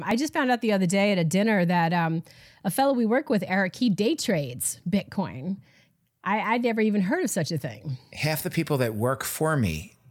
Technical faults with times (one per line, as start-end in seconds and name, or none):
0.11-7.62 clock drift buffer slips